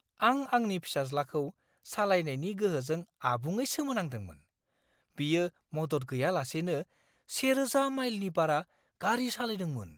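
No technical faults can be heard in this speech.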